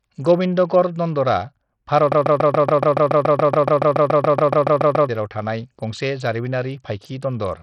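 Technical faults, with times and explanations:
Throughout: Bluetooth SBC compression, likely; heavy sub-band quantisation leaves gritty noise and flickering treble, with nothing above about 14.1 kHz, which fits a low bitrate near 64 kbps.
2.12–5.09 s: broken-record loop, likely a stalled stream; a 142 ms fragment repeats back to back about 21 times, replacing the audio that should have played.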